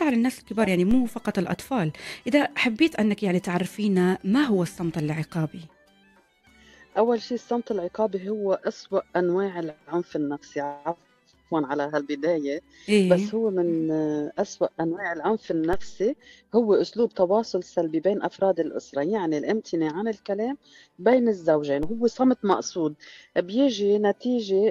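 At 0.91 s, 15.73 s and 21.83 s the waveform's zero line jumps abruptly, a DC step of about -20 dBFS at the first two and about -22 dBFS at the third. Each jump is heard as a dull low thump, after which the offset bleeds away slowly, as though through a high-pass near 2 Hz. Unlike a dropout or digital click, the sound itself carries on intact; only the baseline shifts.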